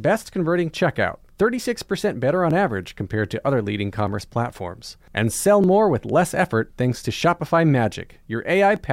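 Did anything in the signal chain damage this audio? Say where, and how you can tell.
Yes: clock drift buffer slips at the driver or buffer stage, heard as a regular click in the speech every 1.56 s from 0.95 s to 8.76 s, about seven times. This is likely two mismatched clocks, roughly 700 ppm apart, dropping or repeating a few dozen samples each slip.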